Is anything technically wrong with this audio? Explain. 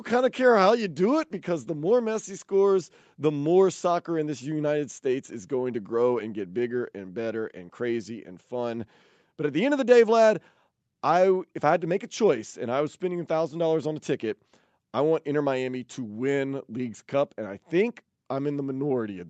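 No, the speech has the expected call-path shape, with the lowest bass trimmed by the call microphone processing and nothing above 8 kHz from the WebRTC call path, consistent with an Opus codec at wideband settings, and nothing in it is faulty.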